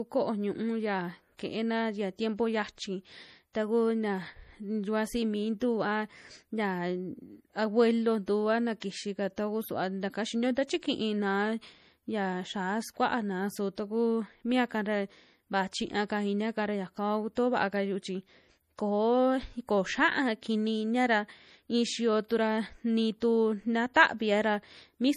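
Throughout the speech the treble stops abruptly at 15 kHz, and the remaining detail has a plainly audible watery, swirling quality with smeared consonant attacks. This MP3 compression damage is likely from a low bitrate near 40 kbps, where the encoder discards high frequencies and lets weak components drop out frame to frame.

Pre-echo occurs at 8.80 s, between "a na" and "taku suva taka xinio", then at 17.35 s, 22.28 to 22.30 s, 23.20 s and 23.94 s. Each time a brief hiss of about 17 to 20 ms precedes a sharp onset, because quantisation noise spreads backwards across the transform block into the quiet moment before the attack.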